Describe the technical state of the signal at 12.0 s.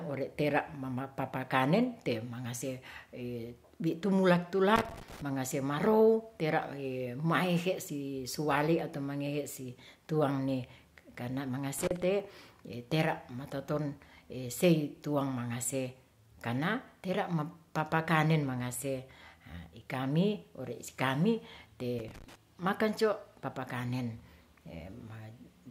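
Loose connector crackle runs from 11.79 to 12.03 s, so the moment at 12.0 s falls near the end of a burst lasting about a quarter of a second. A worn or dirty contact in the signal path is making and breaking as it shifts, chopping the speech on and off in rapid, uneven bursts. It is heard as a short, irregular scratching crackle over the speech.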